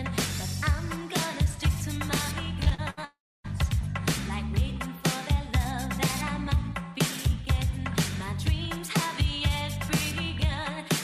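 From 2.63 to 3.05 s, repeated packet loss makes the sound choppy and robotic. Five short holes, the longest 69 ms, are patched by repeating earlier sound.

At 3.05 s the audio stops until 3.46 s, likely a long network dropout. About 0.4 s is lost. A fading buzz gives way to roughly 0.27 s of silence.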